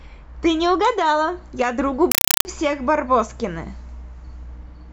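At 2.12 s the speech drops out for about a third of a second, until 2.45 s, and harsh, very loud chattering static takes its place. That's a compressed stream played as audio. A Dolby Digital (AC-3) bitstream went out as if it were ordinary samples instead of being decoded. Each frame comes through as a 4 ms noise burst followed by silent padding, repeating 31.25 times a second, which fits a 192 kbps AC-3 stream.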